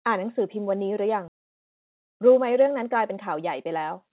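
At 1.28 to 1.30 s the playback performs a skip ahead. Around 0.7 s of speech is missing, and the two sides are spliced almost directly with no silent fill. Unlike a dropout, there is no gap or hiss. The sound simply lurches forward, the audio having been lost on the way or discarded by the jitter buffer while later audio was already queued.

From 1.38 to 3.65 s a jitter buffer speed-up follows. The receiver trims short pitch-period slices again and again to shed the excess delay, removing about a tenth of a second in total. Speech runs at 104%. Unlike a resampling error, the pitch stays where it was. Throughout, nothing reaches above 4 kHz, which fits a 64 kbps G.711 mu-law call path.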